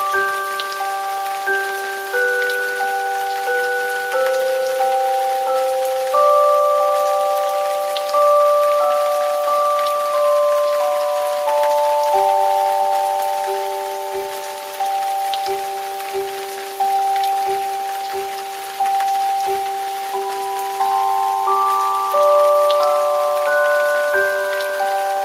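No technical faults can be heard anywhere here.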